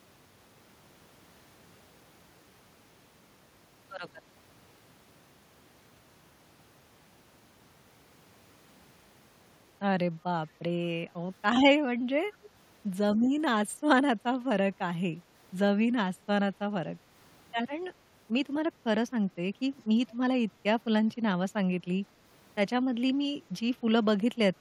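It's a speech clip with one small echo leak, a brief scrap between 12.44 and 12.49 s where a faint delayed copy of the talker slips back in, trailing the original by about 160 ms and sitting quite low, about 25 dB under the speech. The likely cause is a far end on a loudspeaker whose echo canceller let a sliver of its mic pickup through, so that bit got sent straight back to us.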